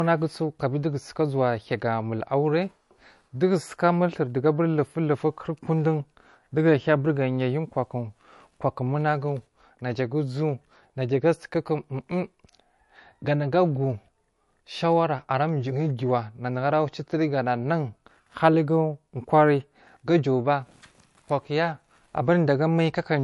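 The speech has likely passed through a low-bitrate MP3 encoder, around 48 kbit/s judging by the damage, before being saved again as a much larger MP3. This is low-bitrate audio saved at a high bitrate. The second encoding cannot bring back what the first discarded, so for the whole clip nothing is heard above 11.3 kHz, and the dull character of the first encoding remains despite the generous file size.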